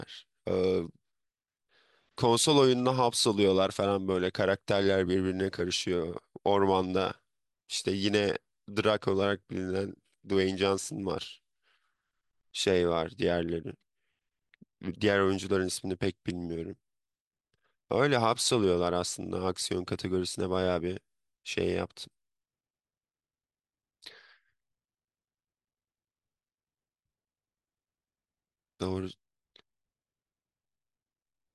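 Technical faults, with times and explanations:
No technical faults can be heard anywhere in the recording.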